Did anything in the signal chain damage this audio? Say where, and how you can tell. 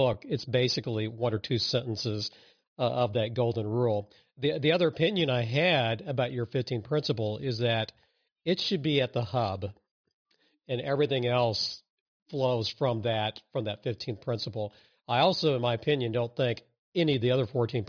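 No, nothing I can hear points to damage at any stage of the chain, so there's nothing here to track down.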